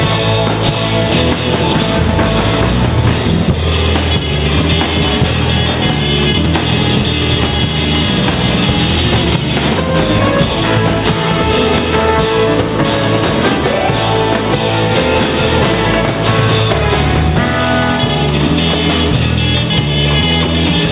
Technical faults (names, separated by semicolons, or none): gain pumping